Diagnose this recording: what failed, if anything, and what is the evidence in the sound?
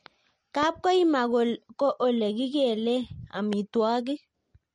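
Codec stage: the speech sounds watery and swirly, with nothing above 10.6 kHz, which points to MP3 compression at a low bitrate, likely around 40 kbps.

Analogue wiring: a loud pop at 0.63–0.65 s and another at 3.53–3.55 s, just after "ko ole kikelee", each about 10 dB above the speech, with the speech continuing underneath. This fits a voltage pulse from a connector or static.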